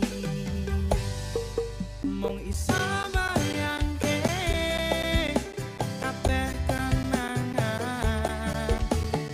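From about 2.03 s right through to 9.29 s there's a run of periodic USB or driver dropouts: roughly every 0.25 s a tiny slice of audio, around 10 ms, goes missing and is replaced by silence. That's the signature of something on the bus or in the driver stalling the stream on a fixed schedule. You hear it as a steady ticking, around thirty little clicks, riding on the sound wherever there's signal.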